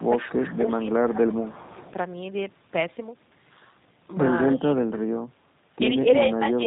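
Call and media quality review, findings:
G.729 codec throughout, consistent with the 8 kbit/s low-rate path. Speech rebuilt from filter, pitch predictor and sparse pulses, band capped at 4 kHz: rough, slightly synthetic, dull top end.

Speech suppressed in double talk, 0.00–0.28 s and 6.15–6.67 s. Echo canceller likely clamping both directions during overlap. Early dip is shallow, about 5 dB. The later one is deep, about 25 dB.

Echo leak, 0.02–0.96 s, likely residual from a loudspeaker not fully cancelled. Delayed copy of the speech returns 344 ms late, about 15 dB below direct level.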